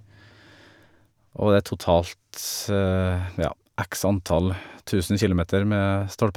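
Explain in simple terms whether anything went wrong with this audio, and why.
Nothing went wrong here: the speech comes through without any audible dropouts, glitches or distortion to point to.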